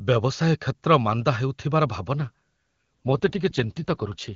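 Speech over AMR-WB, clear at first, then an AMR rate drop at 2.19 s roughens it and makes it more synthetic to the end, which fits a switch from 23.85 to 8.85 kbit/s.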